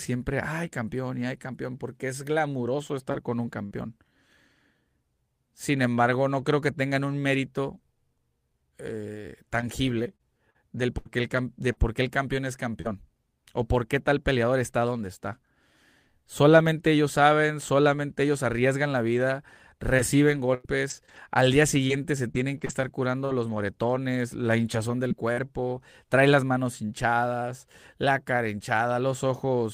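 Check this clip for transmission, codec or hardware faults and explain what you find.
The speech has four kinds of transmission fault, all from lost or late network packets.

Short concealed packet loss occurs twice. The first is at 3.11 to 3.15 s, just after "campeón porque es glamuroso", where about 20 ms never arrived. The second, at 3.66 to 3.73 s, covers 40 ms. In both, the receiver extended the last sound to fill the hole, then blended back into real audio. Each is heard as a brief smear or wobble. A short consonant there can drop out.

A lost packet rebuilt from error correction overlaps the first of those holes, at 3.13 to 3.15 s. The next packet carried a low-bitrate copy of this 20 ms frame. The decoder played that copy instead of leaving a gap. The patch is therefore rougher and noisier than its surroundings.

Repeated packet loss runs from 9.61 to 12.87 s. Seven separate holes, totalling 260 ms, fall close together. 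The longest is 67 ms. Each hole was patched by continuing the previous sound, but the next loss arrived soon after. Only about 8 percent of the stretch is concealed. Even so, the rapid succession makes the speech choppy, with fragments missing.

Scattered short gaps appear from 19.97 to 25.39 s, after "ellos arriesgan la vida". Around ten packets went missing, spread singly across the span, totalling about 340 ms. The longest is roughly a tenth of a second. Each hole was bridged by extending the last sound. About 7 percent of the span is filled this way. Clarity holds between events, but brief hiccups, ticks and smears break in throughout.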